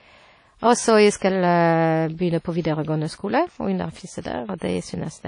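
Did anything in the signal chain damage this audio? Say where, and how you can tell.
Yes, at the codec stage. The speech is band-limited, with nothing above about 10.1 kHz, and the codec damage is plainly audible throughout: a ringing, washy texture and a hiss that rises and falls with the signal. That pattern is likely WMA compression, probably an early WMA encoder at a low rate near 32 kbps. Long transform blocks smear quantisation noise over tens of milliseconds, and weak spectral lines are zeroed out.

The same codec also produces pre-echo at two points. Right after "så jeg", from 1.17 to 1.22 s, a short hiss of about 48 ms comes before the attack. A second pre-echo, about 38 ms long, runs from 2.61 to 2.65 s. In both places a sharp onset landed late in a transform block. The noise level was set by the loud onset but spread across the whole block, so it fills the quiet just before the attack and softens it.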